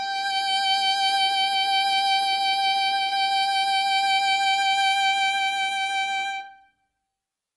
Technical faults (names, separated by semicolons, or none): HE-AAC compression